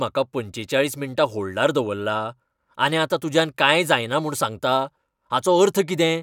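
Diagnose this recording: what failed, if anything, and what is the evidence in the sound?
Nothing in the signal chain has failed: the speech arrives intact, with steady level and continuous signal throughout and nothing audible that would point to a problem at any stage.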